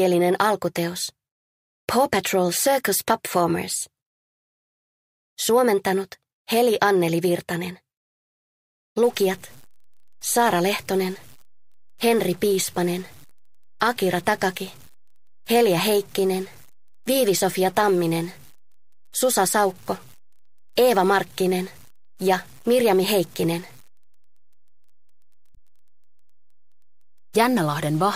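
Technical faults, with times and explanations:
9.04 s to the end, stuck bit: the sound picks up added noise and distortion, and the quiet stretches fill with a steady hiss-like noise instead of falling silent. This is likely one data bit held at a fixed value, pushing about half the samples off by that bit's weight in a waveform-dependent pattern, so the error also flips around zero during pauses.
25.51 to 25.56 s, damaged data in a compressed stream: a brief glitch lasting about 50 ms. Corrupted bytes in the compressed stream made the decoder misread frames and lose sync, then resume at the next valid frame header.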